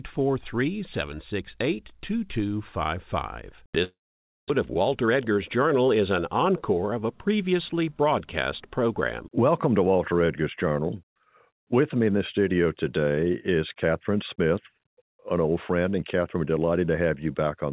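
Speech, carried over a call path whose band stops at 4 kHz, which fits G.711 mu-law at 64 kbps. From 3.84 to 4.52 s the sound gives way to a fading buzz and then near silence, and returns without the missing part. This is likely a long network dropout, not a brief packet loss, because about 600 ms is lost outright. When speech resumes, the playout delay has shifted by roughly 40 ms. From 5.07 to 5.49 s a jitter buffer speed-up trims short pitch-period pieces, about 50 ms in total, so speech runs at 110% speed with unchanged pitch. That unchanged pitch is what separates it from a resampling error, which would raise the pitch as well.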